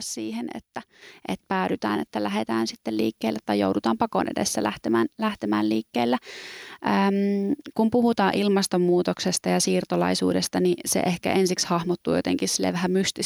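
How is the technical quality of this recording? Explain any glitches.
One glitch stands out. At 1.02 s, the speech and the background noise jump up together by about 6 dB, a microphone volume stepped up event where the call software raised the input level in a single step.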